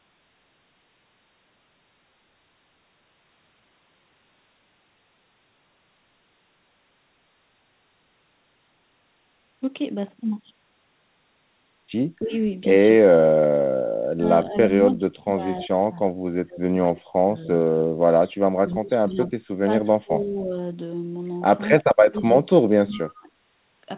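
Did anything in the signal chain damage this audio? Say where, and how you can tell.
Yes. Speech suppressed in double talk, at the call-processing stage: the speech drops in level at 12.2–12.32 s (by about 10 dB), 14.01–17.31 s (by up to about 40 dB), 17.85–19.31 s and 19.66–20.51 s (about 20 dB each), and 21.82–23.37 s (about 30 dB). Within these spans it ducks or cuts out in pieces. The likely cause is an echo canceller that couldn't tell this talker from loudspeaker echo while the far side spoke, so it attenuated both.

Echo leak, also in call processing, at 21.8–21.84 s: a brief, faint copy of the speech returns about 291 ms late and roughly 20 dB below the direct sound, just as the last suppressed stretch begins. This is likely a far-end loudspeaker feeding its microphone, with that side's echo canceller failing to remove the pickup and sending a scrap of it back. The whole clip is band-limited to 4 kHz, consistent with a G.711 A-law call codec.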